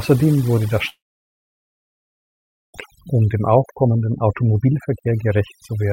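Overdone noise removal runs throughout: an over-strong noise reducer cuts frequency bands near its noise estimate, leaving twinkling specks in near-silence. From 0.89 to 2.75 s, a brief fading buzz or hiss gives way to about 1.8 s of silence, likely a long network dropout. Speech resumes with that stretch lost.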